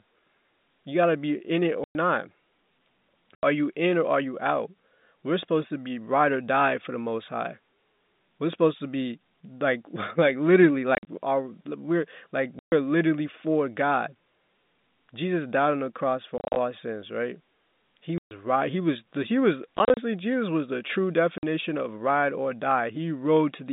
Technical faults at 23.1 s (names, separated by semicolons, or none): none